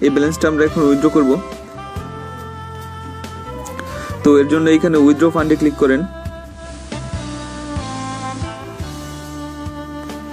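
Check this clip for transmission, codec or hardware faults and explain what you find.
One fault stands out, and it comes from the receiving chain rather than the audio itself.

Digital radio blending to analogue, from 6.49 to 8.66 s: the hybrid receiver lost its digital stream and cross-faded over about 213 ms to the station's FM broadcast, returning the same way at the end. While on FM, the level shifts by about 2 dB, and a steady hiss rises to roughly 30 dB below the programme.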